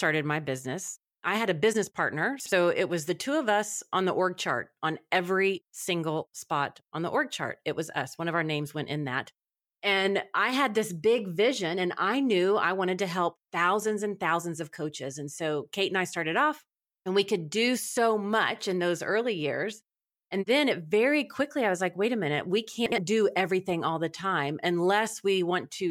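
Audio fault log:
2.40–2.52 s, chunks out of order: just after "had a business partner" and before "it was the two", a 60 ms chunk plays one position late, swapping two adjacent chunks. The 0.12 s span sounds briefly jumbled, with three hard joins.
22.86–22.98 s, chunks out of order: the same one-chunk swap of 60 ms segments occurs between "wait a minute we" and "do everything all the", giving a short garbled moment.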